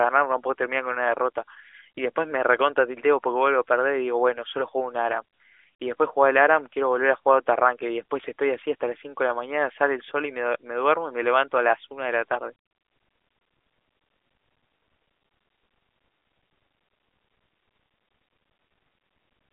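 No technical faults are audible.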